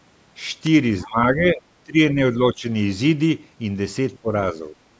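An electrical switching spike at 0.66 s adds a sharp snap on top of the speech. It was likely caused by a nearby switch, motor or static discharge arcing briefly, with the audio line picking up that burst of interference.

The other side's voice leaking through appears from 1.01 to 1.07 s as a brief scrap of a second voice, roughly 25 dB below the main speech. The likely cause is that the far end's loudspeaker sound reached the microphone and the echo canceller left a residue.

Speech suppressed in double talk follows in five stretches: 1.04 to 1.62 s, 1.85 to 2.18 s, 2.39 to 2.66 s, 4.22 to 4.29 s and 4.53 to 4.74 s. The talker's level dips or drops out in pieces. The deepest drop is around 20 dB in the second stretch, and the last is only a slight dip of a few dB. This most likely happened because both sides spoke at once, and the echo canceller, unable to separate them, turned the talker down along with the echo.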